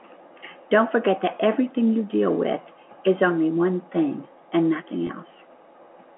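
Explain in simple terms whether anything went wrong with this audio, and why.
Near the end, from 5.07 to 5.09 s, the speech briefly holds and turns slightly buzzy for about 20 ms. This is packet loss with pitch repetition: a tiny piece of the call went missing, likely a couple of packets, and the receiver filled the gap by repeating the last bit of voice.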